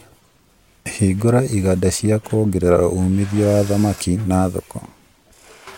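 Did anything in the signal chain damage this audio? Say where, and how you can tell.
No, none of the stages between capture and playback has left any audible damage on this speech signal.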